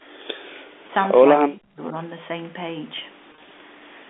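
The speech drops sharply at 0.04–0.09 s, by about 35 dB, and dips again at 0.57–0.73 s, by about 20 dB. This is likely speech suppressed in double talk: with both sides talking, the echo canceller mistook this talker for loudspeaker echo and turned the signal down. At 0.87 s a 20 ms gap is bridged by packet loss with pitch repetition, where the last pitch period is repeated to give a brief held buzz. From 1.41 to 1.95 s the same suppression returns, turning the speech down for roughly 400 ms and up to about 40 dB deep. Between 3.32 and 3.50 s, 90 ms of scattered losses, the longest 30 ms, are filled by repeated pitch cycles, so the sound turns briefly buzzy before it returns.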